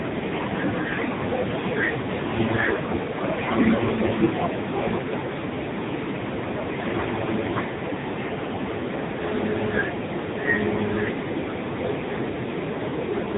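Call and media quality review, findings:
AMR narrowband mobile codec damage, whole clip: heavily buzzy, synthetic speech, band-limited with nothing above 3.8 kHz. Likely AMR-NB at a low mode, sound fits roughly 6.7 kbps; sparse pulse excitation per subframe drives the vocal-tract model coarsely.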